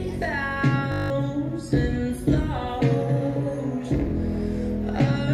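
From 0.92 to 1.1 s the audio collapses into a steady 50 Hz buzz, a system hang loop repeating one 20 ms slice nine times while about a fifth of a second is lost.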